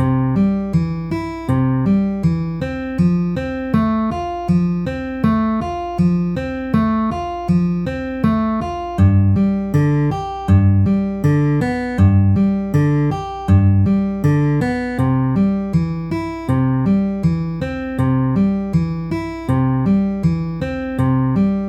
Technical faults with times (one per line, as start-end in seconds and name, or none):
0.00-21.68 mains hum